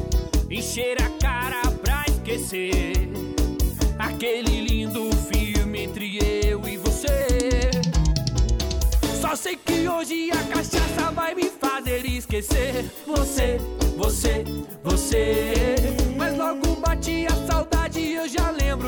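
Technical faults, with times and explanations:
No technical faults are audible anywhere in the audio.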